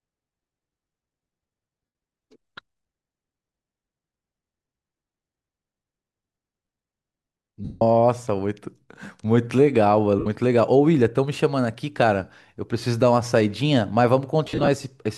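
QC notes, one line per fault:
1.85–14.68 s, lost LE Audio frames: four dropouts in the speech, at 1.85–1.95 s (about 98 ms), 7.65–7.82 s (165 ms), 10.19–10.26 s (about 68 ms) and 14.45–14.68 s, where 150 ms of loss is scattered in short runs of up to about 50 ms. The LC3 decoder covers each gap by repeating the last good spectrum with scrambled phase, so the sound turns into a noisy smear. In the longer gaps, it then fades toward silence.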